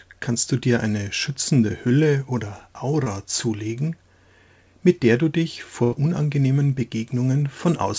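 Short concealed packet loss runs from 3.04 to 3.08 s. About 20 ms of audio failed to reach the decoder in time, and the receiver papered over the hole with roughly 18 ms of synthesized continuation: it extended the sound that came just before, then cross-faded into the real signal as packets resumed. The result is a brief smear or wobble. The lost fragment itself is gone and has been replaced by an estimate of what likely came next.

A burst of packet loss follows from 5.84 to 5.94 s. This time about 80 ms went missing in a row, too long for a seamless patch. The receiver kept extending the last sound for around 81 ms while fading it down, giving a held, dying tone or hiss rather than real content. Playback then picks up further along, so the section in between never plays. Across the clip the call codec's 8 kHz ceiling leaves nothing above that frequency.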